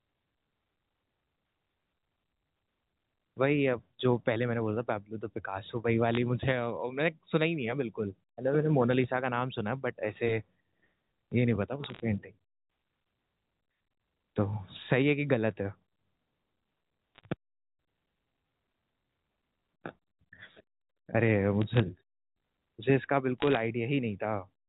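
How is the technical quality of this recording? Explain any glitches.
The recording is telephone-band speech, cut off above 4 kHz as the G.711 A-law line allows, and it has five short bursts of crackle.

Bit errors on a digital phone line occur at 6.14 to 6.17 s, 11.84 to 12.00 s, 17.15 to 17.32 s, 21.62 to 21.80 s and 23.38 to 23.57 s. Flipped bits in the 8-bit logarithmic code words, at a rate of a few tenths of a percent, each corrupt one sample. Flips in the high-order bits, or in the sign of a loud sample, throw that sample far off, giving sharp ticks that cluster into brief crackles while the speech continues unchanged underneath.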